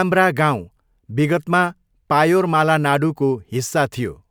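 Nothing stood out on listening to this recording.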